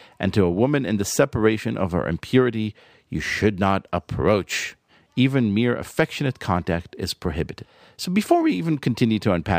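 Imaging from linear upsampling runs throughout the speech. Straight-line interpolation, fitting a rise from 22 kHz to 44.1 kHz, dulls the highs and leaves a mirrored copy from 11.03 to 22.05 kHz, about 30 dB down. Sibilants gain metallic shimmer; a spectrogram shows a faint flipped reflection above 11 kHz.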